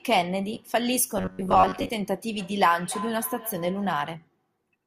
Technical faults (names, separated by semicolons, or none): robotic sound from repeated short buffers; feedback echo between two devices